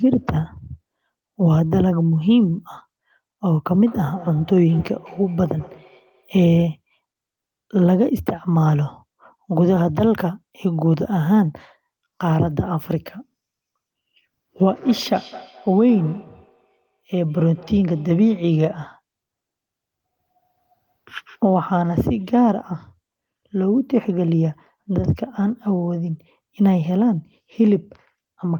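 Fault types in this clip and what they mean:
Feedback echo between two devices: another device in the room replays the call and this microphone recaptures it, beyond its canceller's reach. The speech recurs about every fifth of a second, around 20 dB down, appearing as faint, evenly offset copies on a spectrogram.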